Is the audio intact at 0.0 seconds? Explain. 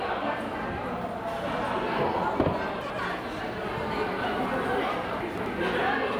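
Yes, the audio is intact at 0.0 seconds, with no fault present at that moment.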